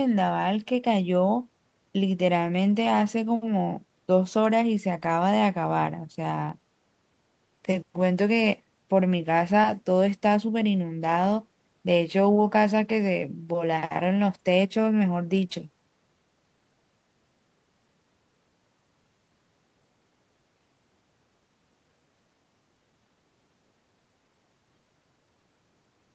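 No technical faults can be heard in this speech. It carries the narrowed sound of a call path, with nothing above about 8 kHz, which fits a wideband Opus setting at around 32 kbps.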